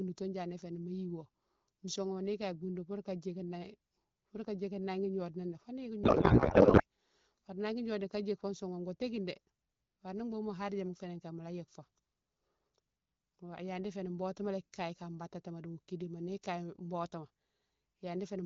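A codec payload misread hits this speech clip from 6.04 to 6.83 s: the receiver unpacks the frame bits in the wrong layout, which fits octet-aligned AMR being read as bandwidth-efficient, so the speech turns into garbled, warbling noise that barely tracks it. Around that, the AMR wideband (HD Voice) coding carries only light codec damage, consistent with a rate near 12.65 kbit/s.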